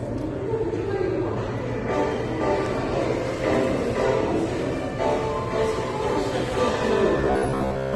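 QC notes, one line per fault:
throughout: transcoding between lossy codecs. The sound is dull, with nothing above about 12.1 kHz. Two kinds of coding texture overlap. The likely cause is audio encoded by one lossy codec and then re-encoded by another, the pattern pointing to Vorbis at around 30 kbit/s followed by Opus at around 32 kbit/s. The second encoder spends its bits reproducing the first one's damage while adding its own, and the lower cut-off survives.
7.17–7.95 s: robotic sound from repeated short buffers. In the closing stretch the sound turns into a rigid, metallic buzz locked at about 66.7 Hz. It still loosely tracks the underlying sound's shape. This likely comes from new audio arriving too seldom, with playback filling the gaps by looping the last fragment. A 66.7 Hz buzz fits a repeated chunk about 15 ms long. Most of this stretch is repeats, so much of the real audio is skipped.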